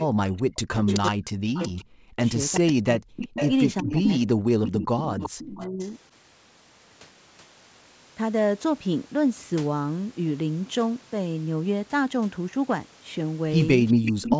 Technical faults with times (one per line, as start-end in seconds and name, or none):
0.05-3.12 speech suppressed in double talk
0.87-1.68 echo leak
2.54-3.95 echo leak
3.82-5.81 speech suppressed in double talk
4.65-5.86 echo leak
13.88-14.37 echo leak
13.94-14.15 background gated by the echo canceller